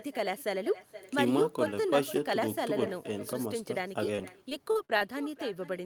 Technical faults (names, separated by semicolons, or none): echo with no canceller; repeated packet loss (robotic sound)